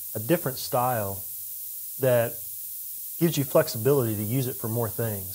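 From start to finish the speech carries low bit depth with noise shaping. The quantisation noise, consistent with about a 5-bit signal, is pushed upward in frequency, giving a steady, thin hiss that climbs sharply toward the top of the band and sits almost level with the speech.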